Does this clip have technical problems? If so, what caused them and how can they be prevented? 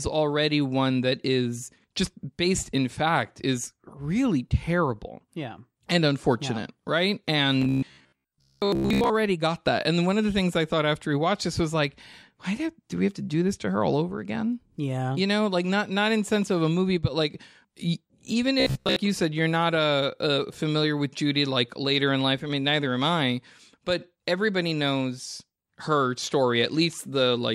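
Yes. Robotic sound from repeated short buffers appears from 7.62 to 9.10 s, after "unfortunate yeah right", and from 18.60 to 18.98 s, before "you said you're not". Speech becomes a rigid metallic buzz at 66.8 Hz, likely because audio arrived too slowly and a 15 ms chunk was looped over most of the stretch. A spectrogram shows evenly spaced harmonic lines, and the waveform shows identical 15 ms cycles. A larger jitter buffer and a steadier network or capture path would prevent it.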